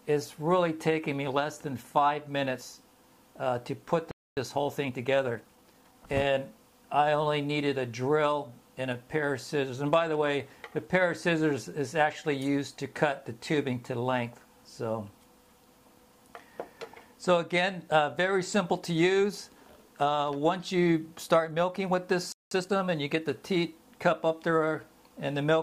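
At 4.11 s the audio cuts off for 0.26 s, until 4.37 s. This is a playback stall, likely from the player running short of data or its thread being blocked. The waveform shows a flat, empty gap, and the spectrogram shows a blank vertical band.

From 4.37 to 6.07 s the player recovers with time-compressed catch-up at 1.15 times normal speed. It trims small pieces and cross-fades across the joins, so the audio sounds hurried while its pitch holds. On the spectrogram, events crowd closer together but the frequency bands stay at the same heights.

The same pair returns later. A 0.19 s playback stall runs from 22.32 to 22.51 s, again a flat gap. Catch-up at 1.25 times speed follows until 23.25 s, shorter than the first and more rushed.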